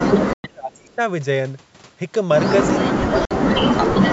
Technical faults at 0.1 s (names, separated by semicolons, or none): speech suppressed in double talk